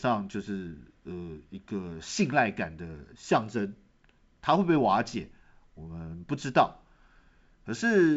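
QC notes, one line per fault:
Nothing to log: the speech sounds like ordinary G.722 wideband telephone audio at what fits 64 kbit/s, with nothing above about 7.7 kHz as you'd expect from that coding, and no faults turn up.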